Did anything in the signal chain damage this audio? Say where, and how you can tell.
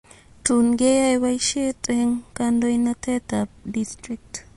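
Yes. The damage sits at the codec stage, most likely MP3 compression at a low bitrate, consistent with about 48 kbps. Throughout the speech nothing survives above 11.3 kHz, and the starved encoder drops weak frequency lines frame by frame, leaving a plainly audible watery swirl and metallic chirps on s sounds.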